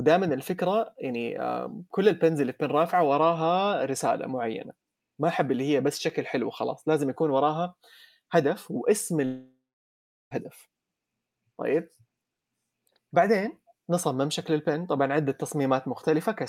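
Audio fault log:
9.25 to 10.33 s, long network dropout: the speech gives way to a buzzy continuation of the last sound that fades into about 0.74 s of silence, then resumes with about 1.06 s of audio missing, likely because packets stopped arriving and the receiver filled the gap.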